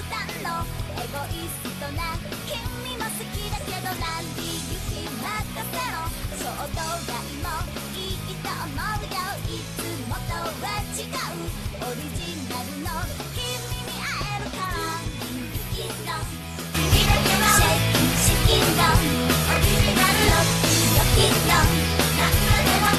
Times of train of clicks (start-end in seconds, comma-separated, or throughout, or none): none